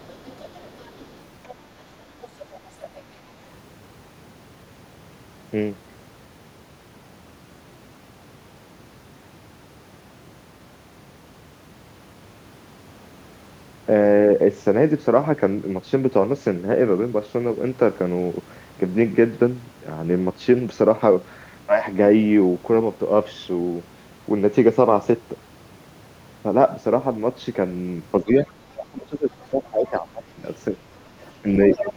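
Speech, with the other side's voice leaking through at 0.0–1.55, 2.21–3.0, 28.41–28.51, 29.40–29.46, 31.22–31.32 and 31.72–31.93 s, mostly faint but louder at the end. It is a separate voice rather than a dip in the talker, likely an echo canceller leaving loudspeaker pickup behind. Speech suppressed in double talk occurs at 28.23–30.78 s and from 31.41 s to the end: the talker's own voice drops by around 20 dB in pieces while the other side speaks, likely the canceller turning both down.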